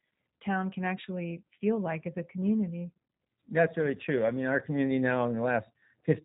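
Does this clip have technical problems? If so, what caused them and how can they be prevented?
Yes. The G.729 codec is audible throughout the speech. It is a low-rate VoIP coder that rebuilds each 10 ms frame from a vocal-tract filter, a pitch predictor and a few pulses, and the roughness fits a rate of about 8 kbit/s. That resynthesis gives a slightly buzzy, synthetic edge. On a spectrogram, energy stops at a flat ceiling near 3.8 kHz, leaving the band above empty. Keeping the call on a wideband codec such as G.722 or Opus prevents this.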